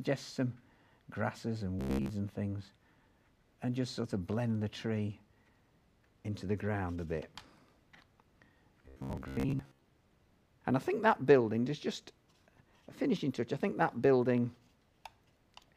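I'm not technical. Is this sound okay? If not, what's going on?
No. Robotic sound from repeated short buffers appears from 1.79 to 2.11 s and again from 8.83 to 9.85 s. In both spots the sound turns into a stiff, metallic buzz pitched at about 66.7 Hz. The likely cause is new audio arriving too slowly, so the playback keeps replaying the last tiny slice, about 15 ms long, to fill the gap. Most of the real sound in those moments is skipped.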